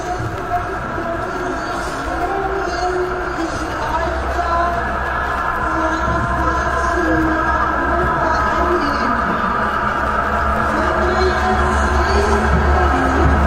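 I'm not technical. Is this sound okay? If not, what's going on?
Yes, nothing in this recording points to a technical problem: the sound stays steady and intact all the way through, with no interruptions or damage to the signal.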